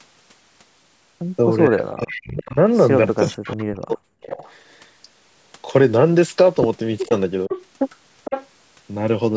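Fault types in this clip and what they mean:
Speech suppressed in double talk: the speech dips sharply at three points where both ends are talking at once, most likely because the echo canceller cannot tell the near talker from loudspeaker echo and attenuates everything. The first dip, from 1.68 to 2.57 s, goes about 35 dB down. The second, from 3.21 to 4.32 s, is the deepest at about 40 dB, with roughly a second of speech affected. The third, from 7.07 to 7.52 s, is a brief shallow drop of about 10 dB.
Echo leak: a delayed copy of the speech returns 459 ms after the original, likely residual loudspeaker echo that the canceller failed to remove and that was sent back down the line. It comes through in short scraps at 2.1 to 2.52 s, 3.17 to 3.65 s and 4.29 to 4.53 s, at about 15 to 20 dB below the speech. A longer stretch from 7.0 to 8.47 s is louder, at about 10 dB under the speech.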